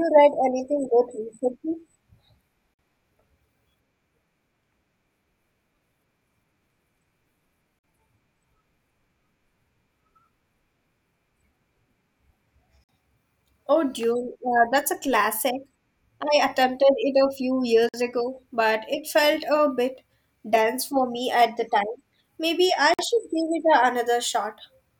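Short, hard-edged holes cut into the speech at 2.74, 7.79, 12.84, 17.89 (just before "ago but it felt") and 22.94 s, each 50 ms of silence. The repeating spacing marks this as a gap between chunks: the audio was carried in 5-second blocks and an empty space was inserted at every join. No speech is removed, but each seam briefly interrupts it.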